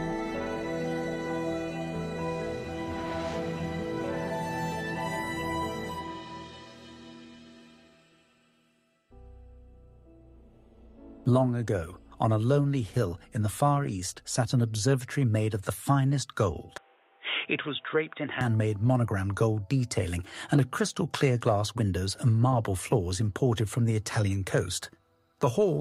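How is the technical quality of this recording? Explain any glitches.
There is one glitch, from 16.78 to 18.41 s, where an input switched to a poorer device is the likely cause. The sound turns dull and boxy with nothing above 3.8 kHz, drops roughly 5 dB, and picks up a faint new noise floor. A plain filter would not shift the level and noise too.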